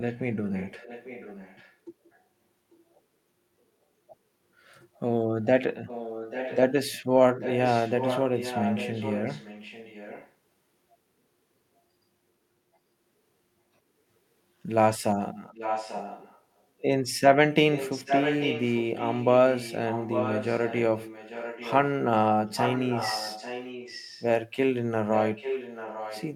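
You get echo leak right from the start, 0 to 2.19 s, and again at 4.95 to 5.0 s, 5.86 to 6.58, 7.4 to 10.33, 15.53 to 16.82, 17.73 to 21.9, 22.56 to 24.27 and 25.13 to the end. A copy of the speech trails it by about 0.84 s. It's barely there at 4.95, well under the speech early on, and from 15.53 to 21.9 it's nearly as loud. The likely cause is a far-end speakerphone whose echo canceller let its own playback back into the line.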